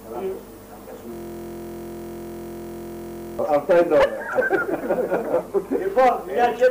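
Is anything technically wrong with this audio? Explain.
Yes. From 1.13 to 3.39 s, a system hang loop: the system froze while the sound hardware kept replaying one 23.22 ms buffer, which fits a 1024-sample ring buffer. Repeated nearly a hundred times, it becomes a steady 43.1 Hz buzz.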